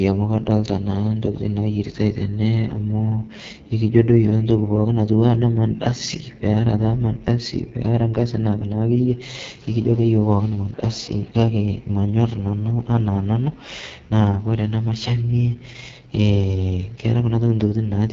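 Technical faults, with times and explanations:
Throughout: AMR wideband (HD Voice) codec. The speech has a rough, raspy texture, and the coding damage is heavy. The sound points to the codec's lowest mode, around 6.6 kbit/s. At that rate the vocal tract model has very few pulses to rebuild each stretch of speech, so the fine detail is lost. Nothing is present above about 7.5 kHz. The top of the band is filled with shaped noise rather than real detail.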